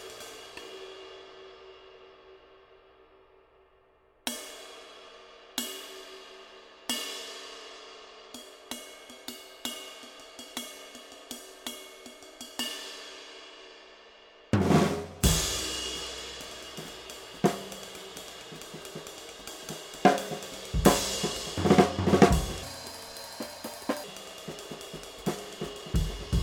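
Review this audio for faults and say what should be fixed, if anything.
A section at the wrong speed runs from 22.63 to 24.04 s. It plays 1.44 times too fast and sits roughly seven semitones high. The likely cause is resampling against the wrong clock. Lock every edit and playback stage to the true sample rate.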